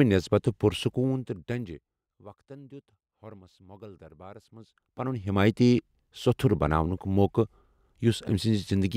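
A speech clip with zipper noise during two level moves. From 0.8 to 2.32 s the level drops about 25 dB. From 4.48 to 5.4 s it climbs back about as far. Each move runs in unsmoothed 1 dB steps, roughly thirty per second. Each step clicks, producing a rapid ticking.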